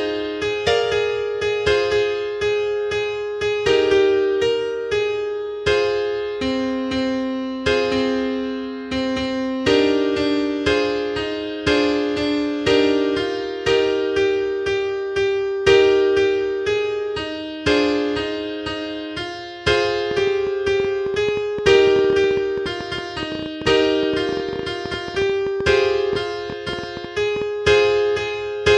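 From 20.11 s to 27.43 s a train of clicks ticks over the sound, about nine per second at an uneven pace, some seventy in all, peaking about 5 dB above the audio. The likely cause is a faulty connection or power supply or nearby interference injecting repeated pulses.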